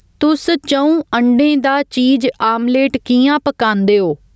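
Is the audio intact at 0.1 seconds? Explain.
No. Gain pumping runs through the whole clip, including 0.1 s: the gain ducks by roughly 10 dB under each loud sound, likely from a fast limiter fighting excessive gain. Unlike a noise gate, pumping does not cut the gaps to silence.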